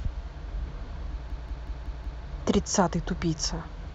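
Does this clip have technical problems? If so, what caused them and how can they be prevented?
Yes. From 1.3 s to 2.23 s the speech falls into a system hang loop. One 186 ms piece repeats five times, a machine-gun stutter at about 5.4 Hz. That fits an 8192-sample ring buffer replaying while the system froze. Prevent it with a driver that mutes output when the audio thread stalls.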